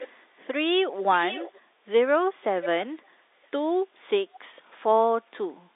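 You'll catch an echo leak at 0.0–0.14, 0.96–1.6, 2.62–2.68, 2.84–3.06, 4.32–4.4 and 4.59–4.63 s: a copy of the speech trailing about half a second behind, fairly clear around 1 s but much quieter later. It's likely a far-end speakerphone whose echo canceller let some through.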